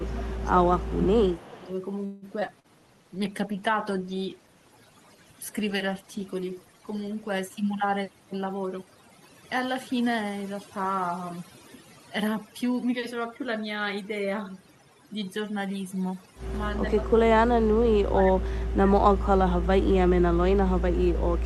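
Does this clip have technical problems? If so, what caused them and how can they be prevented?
Yes. The speech clip has several technical problems.

Overdone noise removal runs through the whole clip. The background drops and breaks up into twinkling specks. A noise suppressor set too aggressively is cutting individual frequency bands whenever they come close to its noise estimate, and it takes the quieter parts of the speech along with the noise. Lowering the suppression strength, or reducing noise at the source with a better microphone position, prevents this.

Speech suppressed in double talk affects three stretches. From 0 to 1.7 s the voice dips by up to about 15 dB over roughly one and a half seconds. From 17.6 to 20.1 s it loses up to about 25 dB, and from 20.5 s to the end it falls by up to about 30 dB. The likely cause is an echo canceller that could not separate this talker from loudspeaker echo while both sides spoke at once, so it turned everything down. 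An echo canceller with better double-talk detection, or headsets on both ends, prevents it.

An echo leak appears from 1.28 to 1.64 s. A faint, delayed copy of the voice trails the original by 339 ms, about 25 dB below it. This is likely loudspeaker sound on the far end that its echo canceller failed to fully remove, which was then sent back. Headphones on that side, or better-tuned echo cancellation there, prevents the leak.

A call audio freeze runs from 2.05 to 2.25 s. The sound is stretched into a fading continuation for 167 ms and then resumes where it stopped, so nothing is lost but a gap is inserted. This likely happened because delayed packets let the jitter buffer run empty. A steadier network path, or a slightly larger jitter buffer target, avoids it.

Skip ahead happens twice, from 2.40 to 2.44 s and from 2.47 to 2.51 s. Each time the audio jumps forward with almost no gap, and roughly 70 ms of sound disappears at each joint. 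Part of the stream was discarded, in transit or by an overflowing jitter buffer, while later audio was already queued. Reducing network burstiness, and letting the buffer shrink by time-compression rather than by dropping audio, prevents this.

Short concealed packet loss occurs from 2.60 to 2.67 s. There is a brief smear where 60 ms of audio never arrived in time, and the receiver filled the hole with 41 ms of synthesized continuation before blending back into the real signal. Forward error correction, or redundancy in the codec, would cover a loss this short.

A call bitrate drop lasts from 2.78 to 8.71 s. The sound turns coarse, watery and duller, with the worst stretch lasting about 3.3 s. This fits the encoder being pushed from about 64 kbps down to 20 kbps after the bandwidth estimate fell. More available bandwidth, or a higher minimum bitrate setting, prevents such a drop.

A jitter buffer slow-down runs from 2.80 to 4.07 s. 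The speech plays at about 91% speed with unchanged pitch and drawn-out sounds, because repeated pitch periods added 126 ms while the buffer rebuilt its reserve. A more stable network keeps the buffer from running low.

A jitter buffer speed-up runs from 8.2 to 9.43 s. The speech sounds hurried at about 114% speed and the same pitch, as roughly 200 ms was trimmed while the buffer held more audio than it aims for. Smoother packet delivery avoids this catch-up.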